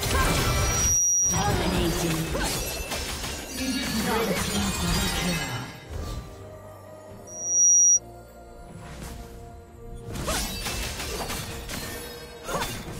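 Loudspeaker feedback squeal breaks into the audio twice, from 0.41 to 1.63 s and again from 7.27 to 8.00 s. Each time a single 5.8 kHz tone swells over roughly 0.4 to 0.5 s and then sits above the programme, by a few decibels the first time and closer to about 10 dB the second. A microphone is hearing its own loudspeaker, and at 5.8 kHz the loop gain exceeds unity. On a spectrogram each squeal is a bright horizontal line that thickens as it builds.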